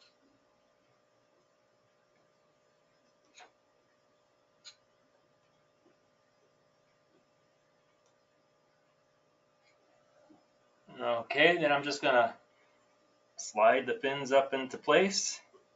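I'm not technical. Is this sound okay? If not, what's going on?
No. A noise suppressor meant for speech was left switched on, and it is applied to music or sounds here throughout the clip. It mistakes steady tones, background ambience and echo tails for noise and keeps turning them down. Sharp starts get through, but anything held or fading gets pushed far down, with large swings in level. The result is a sound that pumps and flutters and keeps thinning out. The call's own sound path also cuts off the very top of the treble, which is normal for a call.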